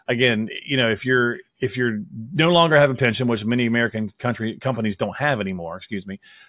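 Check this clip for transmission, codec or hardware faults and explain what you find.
No transmission, codec or hardware faults turn up in this speech clip.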